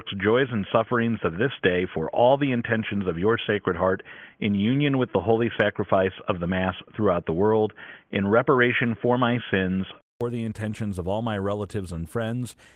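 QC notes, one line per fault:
0.00–10.21 s, input switched to a poorer device: the speech is dull and boxy, with nothing above 3.4 kHz, a faint noise floor roughly 50 dB down, and a level about 5 dB different. At 10.21 s a 0.2 s silence precedes "the intentions of all", after which the full band returns. This points to a likely switch from a headset call profile back to a wideband microphone. Light Opus coding runs across the whole clip.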